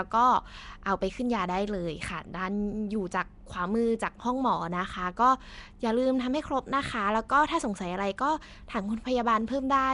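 From start to finish, the speech carries a rough, hissy halo and a smeared, underwater blur, with nothing above 10.6 kHz. The likely cause is Nellymoser compression: coarse two-bit coding of 256-sample blocks starves weaker bands, which are then filled with noise.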